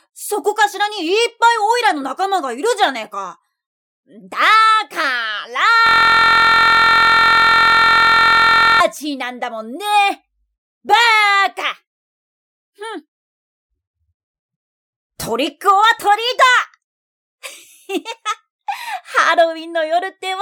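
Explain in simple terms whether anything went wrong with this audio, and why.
From 5.87 to 8.80 s, a system hang loop: the computer froze and replayed one 23-millisecond slice about 43 times a second, making a steady buzz rather than silence or stutter.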